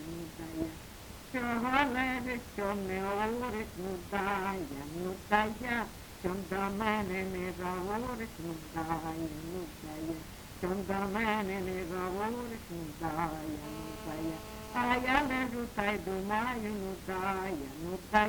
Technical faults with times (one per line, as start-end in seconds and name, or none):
13.64-15.46 GSM phone buzz